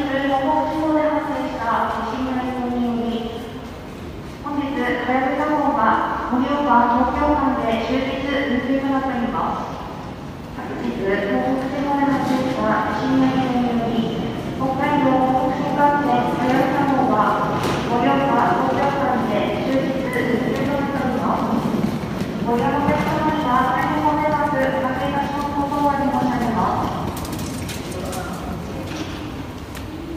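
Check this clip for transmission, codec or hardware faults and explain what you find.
Listening through the clip turns up no faults at all. There is nothing here that needs to be flagged or explained.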